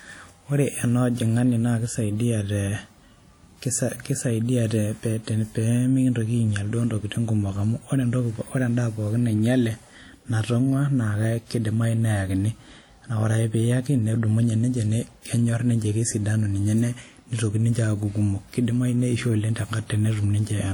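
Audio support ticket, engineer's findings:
Throughout: plainly audible ringing, washy speech, hiss pumping with level. Likely WMA compression, fitting an early WMA encoder near 48 kbps, whose long transform blocks smear quantisation noise. Spectrogram: blurred onsets, holes where weak bins zeroed, content to 20.1 kHz.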